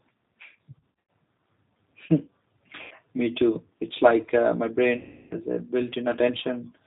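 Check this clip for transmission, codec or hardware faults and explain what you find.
Two faults are present: G.729 coding throughout, and three bursts of VoIP packet loss concealed by the speech codec.

The G.729 codec, here its G.729A form, runs for the whole clip, and the roughness points to an 8 kbit/s setting. The decoder rebuilds the speech from a vocal tract filter, a pitch estimate and a handful of pulses per frame, and discards everything above 4 kHz. The damage is plainly audible: the speech sounds dull, slightly grainy and synthetic.

The VoIP packet loss concealed by the speech codec strikes at 0.79–0.97 s, 2.82–2.94 s and 4.98–5.36 s. Packets failed to arrive, and the decoder filled each gap by repeating its last pitch and filter settings at falling gain. The first burst is scattered across about 300 ms, with its longest run near 90 ms, which fits roughly six lost packets. 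The second covers about 90 ms. The third is the worst, about 330 ms of loss. In each gap the speech smears into a buzzy tone or coloured noise that fades. Because each frame depends on the one before, the speech stays weak and distorted for a short time after the audio resumes.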